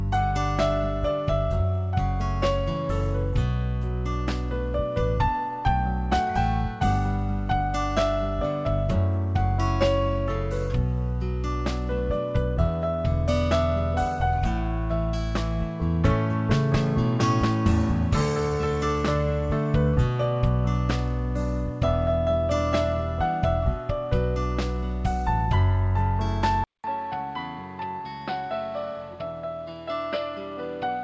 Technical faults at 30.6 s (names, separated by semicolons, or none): input switched to a poorer device